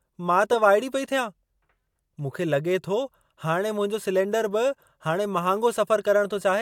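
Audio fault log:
Nothing to log here; the speech comes through without any fault to note.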